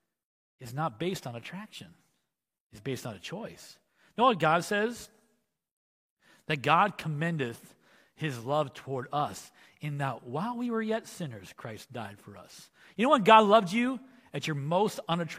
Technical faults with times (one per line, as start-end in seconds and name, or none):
none